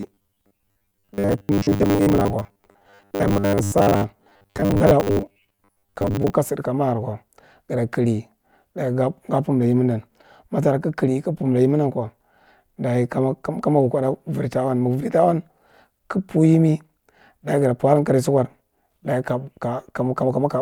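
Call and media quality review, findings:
Robotic sound from repeated short buffers, 0.01 to 6.35 s. Speech turns into a rigid metallic buzz near 100 Hz, loosely following the words. Likely playback buffer starvation: a 10 ms chunk replays to fill gaps, so about half is repeats.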